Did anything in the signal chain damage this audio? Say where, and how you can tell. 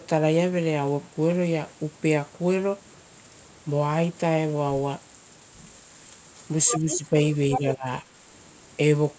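Yes, two faults, both in the call processing stage.

Other side's voice leaking through: a second voice appears at 6.67–6.98 s and again at 7.51–7.6 s, only about 5 dB below the talker. This is likely loudspeaker playback reaching the microphone and not being fully removed by the echo canceller.

Speech suppressed in double talk: the talker's level dips by about 5 dB between 6.71 and 7.14 s, then drops much harder, about 20 dB, from 7.59 to 7.86 s. Both dips overlap the leaked voice, so the canceller was likely turning down the whole signal while both sides were active.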